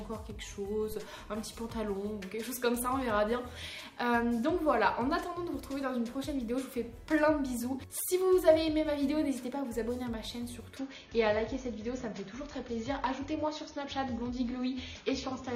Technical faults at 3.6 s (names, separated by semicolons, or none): none